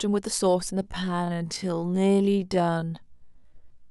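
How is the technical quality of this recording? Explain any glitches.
The recording has one clear glitch. From 0.8 s to the end, the speech abruptly drops to half pace while its pitch stays put, so it drags. This is likely a time-stretched section, where software lengthened the audio by repeating short fragments instead of lowering the pitch.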